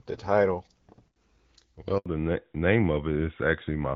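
At 1.98 s the speech cuts out for 80 ms, until 2.06 s. That's a handover gap: the phone was switching the call between networks, and no speech frames came through during the move. The sound drops away almost instantly and there's nothing until the new link picks up, so whatever was said in that stretch is simply gone. It's short, but you hear it as a sudden hole in the middle of the speech.

Right when the audio comes back at 2.06 s, the character changes, and it stays that way through to the end. This is a fallback to narrowband. Before the gap the speech has the light, slightly airy top you'd expect from HD Voice, which fits AMR-WB at around 12.65 kbit/s. After it, everything above 4 kHz is gone, consistent with the call landing on AMR-NB at 12.2 kbit/s. The speech turns duller and a bit rougher, with that classic boxed-in phone sound.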